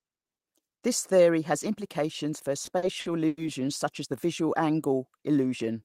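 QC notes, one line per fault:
2.65–3.39 s, repeated stalls (stutter): between "theory has implications for" and "such as the", playback hiccups four times as the jitter buffer runs dry, and the receiver stretches the last sound to fill each wait, fading it in the longest, about 100 ms. These fills total 220 ms, roughly 30% of the span, yet nothing is lost, so the sound drags and catches rather than skipping ahead as it would with dropped packets.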